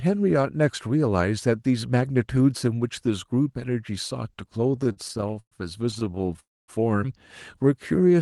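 From 4.71 to 5.53 s, and again from 5.91 to 6.40 s, the speech drags and stutters, with sounds briefly stretched before moving on. This is repeated stalls (stutter): packets arrived late, so the jitter buffer kept running empty and the receiver extended the last sound. The first stretch has 14 gaps, the longest 118 ms, covering about a third of that span. The second has 11 shorter gaps of up to 17 ms.

Right after, from 6.40 to 6.70 s, the audio halts and goes quiet for about 250 ms, then resumes where it stopped. This is a call audio freeze, likely from packets held up in transit while the buffer emptied.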